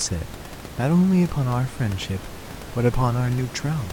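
Nothing's technically wrong with this bit of speech; the only thing in the background is some ordinary room noise sitting about 15 dB below the talking, and that's just part of the recording space rather than a system problem.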